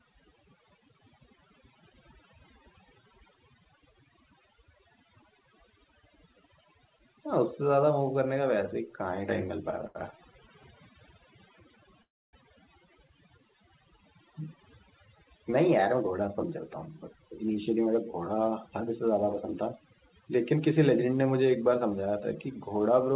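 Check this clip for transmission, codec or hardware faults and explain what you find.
Four kinds of fault are audible in this speech clip, carried over a call link whose sound stops at 4 kHz, which fits a narrowband G.711 codec.

Overdone noise removal runs through the whole clip. The background sinks to near silence dotted with twinkling specks. A noise reducer set far too strong is switching off frequency bands near its noise estimate, taking quiet parts of the speech with them.

A short stall from a late packet occurs at 9.87 to 9.98 s. One sound is held about 76 ms too long, then the speech carries on from the same point. A packet arrived late, the jitter buffer emptied, and the receiver stretched the last sound while it waited.

A call audio freeze occurs at 12.02 to 12.36 s. The last sound trails off briefly into about 280 ms of silence, then resumes where it stopped, inserting roughly 0.31 s of gap with nothing lost. 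The likely cause is delayed packets draining the jitter buffer, with the receiver filling the wait.

A jitter buffer speed-up occurs at 15.67 to 16.43 s (104%), 17.14 to 18.21 s (107%) and 22.21 to 22.91 s (105%). The speech runs faster at unchanged pitch, sounding hurried in the last two stretches. To shed excess buffered delay, the receiver cut out short pitch-period pieces, around 40 ms in the first and last stretches and about a tenth of a second in the middle one.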